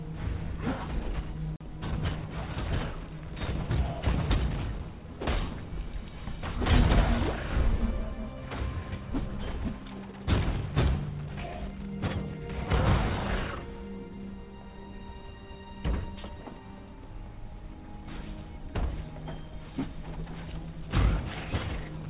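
No technical faults are audible.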